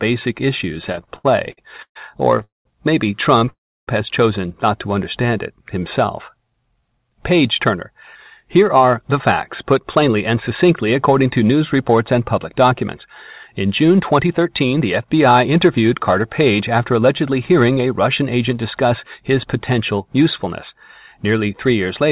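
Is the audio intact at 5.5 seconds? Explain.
No. From 5.22 to 7.11 s a jitter buffer slow-down is under way: the receiver's buffer ran short of audio, so it rebuilt its reserve by repeating single pitch periods and fragments of pauses again and again, adding 133 ms in all. The speech is stretched to about 93% of its normal speed while the pitch stays put, so sounds come out drawn out and dragging, sometimes with a slight warble from the repeated cycles.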